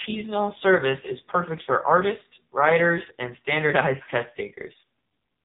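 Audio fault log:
throughout, AMR narrowband mobile codec: the speech sounds thin, buzzy and synthetic, with nothing above 4 kHz, as the 8 kHz sampling cuts the top and sparse pulse-driven vocal-tract modelling rebuilds each frame. The heavy damage fits a low mode, around 5.9 kbps.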